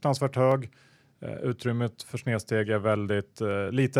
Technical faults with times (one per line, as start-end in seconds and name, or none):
0.52-3.51 clock drift buffer slips